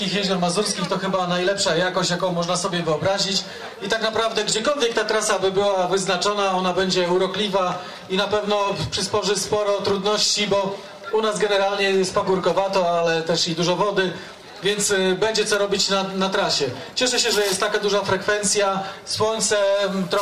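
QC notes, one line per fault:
No technical faults are present; the signal holds continuity with nothing in it that points to a problem anywhere in the recording or playback chain.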